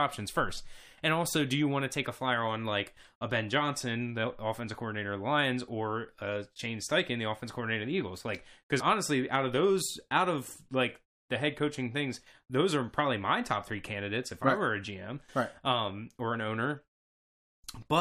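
At 6.58 s, right after "or uh", and again from 8.79 to 8.81 s, just before "honestly out of those", damaged data in a compressed stream makes the decoder misread frames and lose sync, producing brief glitches that show as thin broadband vertical smears and abrupt waveform breaks.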